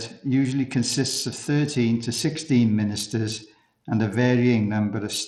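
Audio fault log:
throughout, Bluetooth SBC compression: treble flickers and drops out beneath gritty, aliased noise, likely SBC starving its upper sub-bands of bits, which fits roughly 80 kbps.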